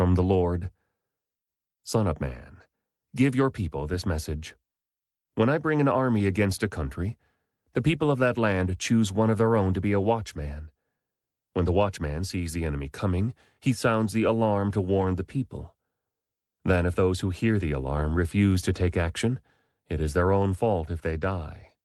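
After "sounds the alarm to", at 14.97 to 15.03 s, a lost packet is rebuilt from error correction. Again at 17.97 to 17.99 s, between "those who hear the" and "refuse to take action". There is no gap. The first event fits two lost 20 ms packets, and the second fits one. Each was replaced by a low-bitrate copy carried in the next packet. Those brief stretches sound rougher and noisier.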